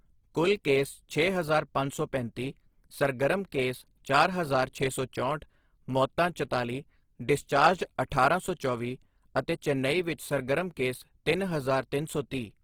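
A speech clip with plainly audible codec damage throughout, most likely from Opus compression in its music mode: tones sound grainy, rough and noisy rather than swirling, which fits a low bitrate around 16 kbps, while the bandwidth stays full, reaching about 20.2 kHz.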